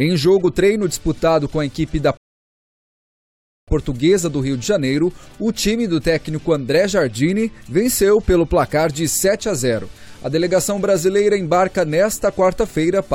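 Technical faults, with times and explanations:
2.17 to 3.68 s, rebuffering stall. The audio drops to silence for about 1.5 s, then carries on from exactly the point where it stopped. The player had used up all the audio it had downloaded, so it paused and waited for more data to arrive. Because playback simply halts and resumes, no sound is skipped or repeated. The only effect is a gap that stretches the clip by that 1.5 s.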